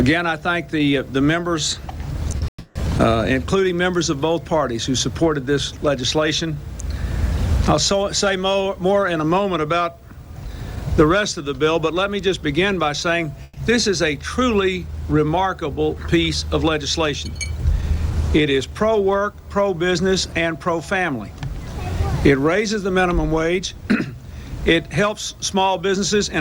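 Short concealed packet loss at 2.31 s, 2.38 to 2.42 s and 2.44 s: brief gaps of 10 to 30 ms were patched by extending the preceding sound, giving quick smears or wobbles. A long network dropout follows from 2.48 to 2.76 s. For about 0.28 s no audio was played: the last sound stretches into a fading buzz or hiss, falls briefly silent, then resumes further on, likely because packets stopped arriving. A burst of packet loss from 13.43 to 13.57 s removes about 130 ms. The receiver holds the last sound as a decaying buzz or hiss before the audio picks up again past the missing part.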